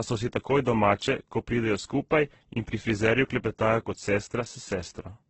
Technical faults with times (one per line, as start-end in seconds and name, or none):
0.00-5.29 transcoding between lossy codecs